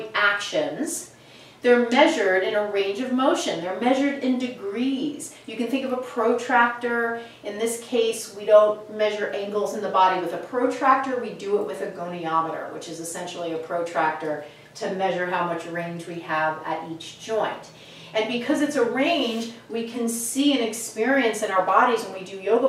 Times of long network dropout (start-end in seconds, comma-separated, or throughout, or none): none